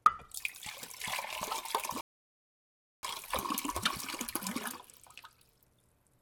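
At 2.01 s the sound drops abruptly into silence and stays silent until 3.03 s, then picks up at exactly the point where it broke off, with nothing skipped. That is a rebuffering stall: playback used up all the audio it had downloaded and had to wait for more data before it could continue. Because nothing is lost, the pause simply lengthens the clip, adding about 1.02 s of dead air.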